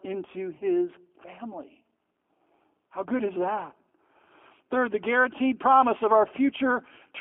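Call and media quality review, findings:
G.729 codec damage throughout: narrowband 250 Hz to 3.4 kHz, rough, synthetic texture that fits 8 kbit/s CELP coding, unlike plain band-limiting, which stays smooth.

VoIP packet loss concealed by the speech codec, 0.58 to 0.62 s: a 20 ms gap bridged by decaying extrapolated sound, consistent with one lost packet. It is not a click or a silent dropout.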